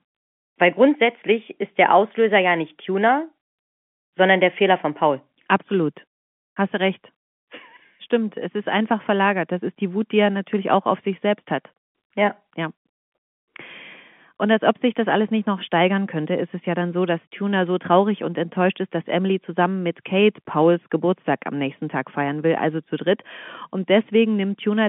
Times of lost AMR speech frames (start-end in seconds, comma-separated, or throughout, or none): none